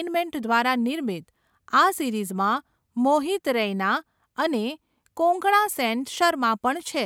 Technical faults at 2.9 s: none

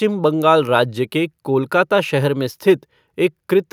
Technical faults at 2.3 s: none

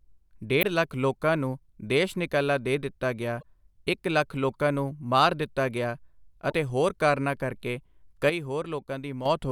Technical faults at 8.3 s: sudden gain jump

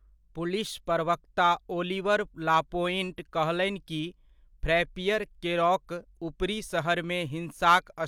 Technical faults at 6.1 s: none

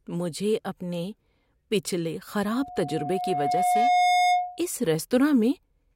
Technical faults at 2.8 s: loudspeaker feedback squeal

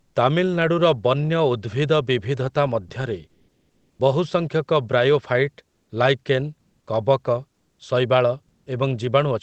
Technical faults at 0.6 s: none

